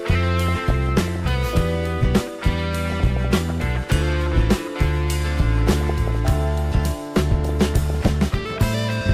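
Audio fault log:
0.47–1.20 s, 2.85–3.76 s, 5.67–6.27 s, 7.44–8.09 s: DAB burbling. Bit errors, well under one percent, slip past error correction, so single sub-bands get short blips of noise and sub-bands jump in level for up to a frame.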